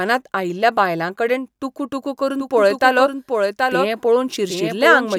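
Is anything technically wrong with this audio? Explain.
Yes. From 2.39 s, right after "आयिल्ल्या बायलांकडेन टुकूटुकू", and running to the end, the speech is heard as a doubled audio track. A second full-band copy trails the original by roughly 0.7 s, about 5 dB quieter, with no decay or room colour, and it starts abruptly. This is likely a second capture path or an edit holding two copies out of step. On a spectrogram, each speech pattern repeats about 0.7 s later, slightly fainter. On the waveform, overlapping envelopes suddenly thicken at 2.39 s.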